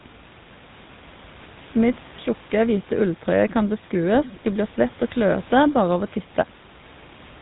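A speech recording carries GSM full-rate codec damage from start to finish, plainly audible as a buzzy, gravelly roughness laid over the voice, with nothing above 4 kHz. The codec rebuilds the voice from a vocal-tract model driven by a sparse pulse excitation, which fits the 13 kbps full-rate coder. That rasp in the voice itself is what separates it from simple telephone band-limiting, which would sound muffled but smooth. The room noise sits about 23 dB below the speech.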